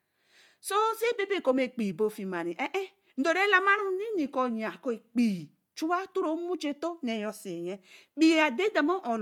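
Throughout the speech, a transform codec has likely discarded fine detail in the upper spectrum and filled it with noise. This is Bluetooth LC3 compression, at a rate that points to about 48 kbps with 10 ms frames. The result is a plainly audible breathy, grainy edge, with nothing above 20.2 kHz.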